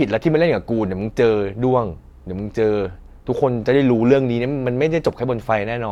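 No technical faults can be heard at any point in the recording.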